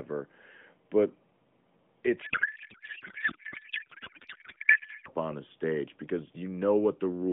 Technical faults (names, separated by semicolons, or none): codec payload misread